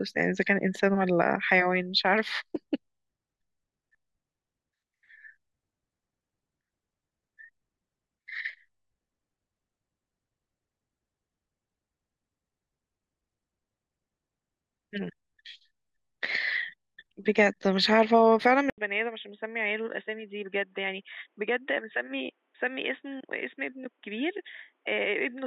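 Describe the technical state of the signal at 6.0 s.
At 6.0 s the speech signal is intact, with no dropout, clipping, distortion or other audible fault at that point.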